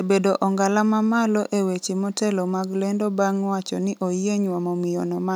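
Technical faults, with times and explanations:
No technical faults can be heard in this speech clip.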